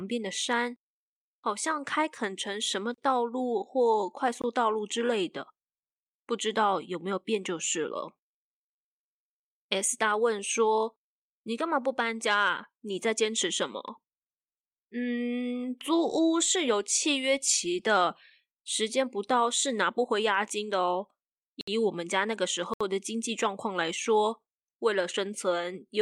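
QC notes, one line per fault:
4.42 to 22.81 s, block of digital silence: the speech drops to silence three times, at 4.42–4.44 s (about 21 ms, which fits a 1024-sample buffer going unfilled), 21.61–21.68 s (64 ms) and 22.74–22.81 s (70 ms). The hard cut in and out has no fade, so the first one is a very short hole and the longer two are short holes.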